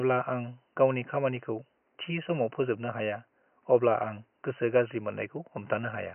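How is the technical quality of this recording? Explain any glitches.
The technical quality of this recording is good, and there are no glitches to explain.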